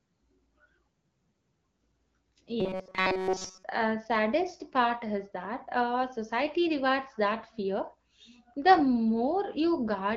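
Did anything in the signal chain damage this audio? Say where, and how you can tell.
Yes. From 2.60 to 3.63 s the speech turns into a rigid, metallic buzz pitched at 188 Hz, the robotic sound from repeated short buffers. This points to the driver or buffer stage. The likely cause is audio arriving too seldom, so a segment of about 5.3 ms is replayed for most of that second while the real audio is skipped. A spectrogram shows flat, evenly spaced harmonics at multiples of 188 Hz, and the waveform shows identical cycles repeating.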